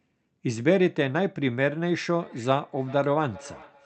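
Speech carried over a call, with the top end stopping near 8 kHz as the Opus call codec band-limits it. From 2.1 s to the end there is feedback echo between two devices. A second device in the same room plays this call back, and its sound leaks into the first microphone. Each device's echo canceller removes only its own playback, so the leak survives. Repeats come back roughly every 0.4 s, peaking about 22 dB below the direct speech, each pass thinner and more ringing.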